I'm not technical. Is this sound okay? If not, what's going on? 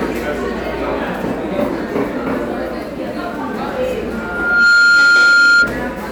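No. From 4.11 s to 5.74 s there is a loudspeaker feedback squeal: a single steady tone at about 1.4 kHz, a high whistle, that swells up over roughly half a second and ends up clearly louder than the rest of the sound. It happens when a microphone hears the loudspeaker it is feeding, so one pitch keeps looping back and getting louder until the amplifier limits it or the loop is broken; here it stops at 5.74 s.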